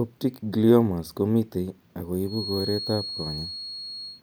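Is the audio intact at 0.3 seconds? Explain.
Yes, at 0.3 seconds the speech runs cleanly, with no dropout, click or other fault to be heard at that moment.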